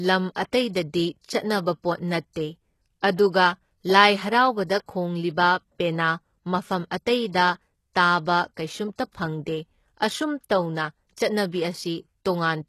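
Speech, with HE-AAC compression damage plainly audible from start to finish. The upper range sounds synthetic: s sounds come out gritty and lispy, with a metallic sheen, which points to a very low bitrate, consistent with about 16 kbps. The treble is most likely rebuilt by spectral band replication rather than coded directly. On a spectrogram, the upper bands look like smeared, blocky copies of lower ones, and everything above 12.3 kHz is cut off sharply.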